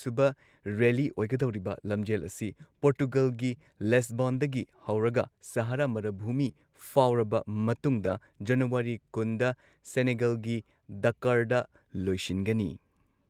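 Around 2.21 to 2.23 s, then 4.33 to 4.35 s and 6.47 to 6.49 s, you get a lost packet rebuilt from error correction. Each time about 20 ms of speech comes from the low-bitrate backup copy carried in the next packet, so there's no gap, just a brief rougher, noisier patch.

Right after that one, at 6.51 to 6.55 s, there's a short concealed packet loss. About 20 ms never arrived, and the decoder filled roughly 18 ms of it by extending the previous sound before blending back, so it comes across as a quick smear or wobble.

At 8.05 to 8.11 s the error-correction rebuild returns, this time for about 40 ms, which fits two separate lost packets. That makes the grainy, degraded stretch longer than the earlier ones.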